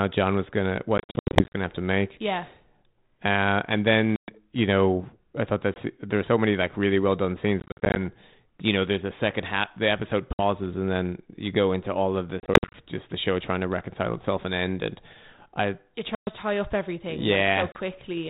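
Packet loss on an ADPCM call breaks up this speech clip at 0.98–1.60, 4.16–4.30, 5.74–5.78, 7.60–7.96, 10.33–10.42, 12.40–12.76, 16.15–16.31 and 17.72–17.78 s. Chunks of audio are dropped and replaced by hard-edged silence, from a brief 20 ms gap up to scattered bursts such as the first, where 350 ms vanishes across 560 ms in runs of up to 80 ms. Because the receiving decoder's adaptive predictor and step size lose track of the sender's, the speech after each hole comes back slightly distorted before settling over the next few tens of milliseconds. The underlying narrowband G.726 coding, band-limited below 4 kHz with light added noise consistent with 32 kbit/s, is heard between the dropouts.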